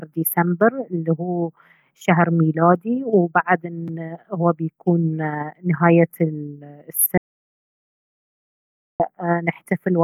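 At 7.18 s the speech cuts off abruptly into an audio dropout to silence lasting about 1.82 s, until 9.00 s, when it resumes mid-flow. The input was likely lost while zeros kept being written. The waveform shows a dead-flat line, and the spectrogram is blank, with no room tone.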